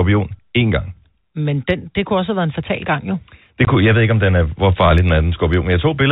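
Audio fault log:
3.65–3.67 s, packet loss filled with silence: A 20 ms hole cuts through the speech. The missing audio was replaced by silence rather than concealed, so the gap starts and ends abruptly. The length fits two lost 10 ms packets. Beneath it, the G.711 telephone coding keeps the band under 4 kHz.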